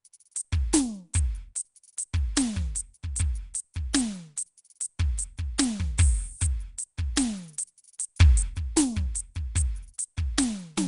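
From start to finish the music sounds rough and hissy, with a smeared, underwater quality and nothing above 10.6 kHz, likely Nellymoser compression at roughly 44 kbps.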